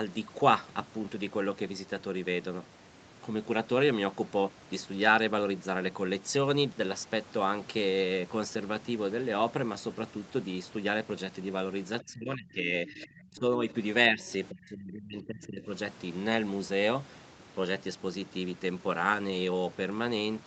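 An echo canceller that likely could not tell its own talker from loudspeaker echo while both ends spoke at once has clamped down on this speech recording, producing speech suppressed in double talk. The voice sinks by about 25 dB across 12.03 to 13.67 s, dips only slightly, about 5 dB, between 14.09 and 14.26 s, then drops deeply again from 14.5 to 15.69 s, so the talker seems to fade or break up in pieces. The same canceller also likely failed to remove all of the far end from the microphone, leaving the other side's voice leaking through as a brief scrap from 13.01 to 13.07 s, about 20 dB below the talker, in the middle of the first suppressed stretch. Through all of this, the Opus call path's 8 kHz audio bandwidth keeps the top end bounded throughout.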